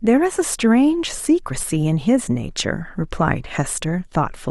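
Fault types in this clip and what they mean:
No technical faults are audible.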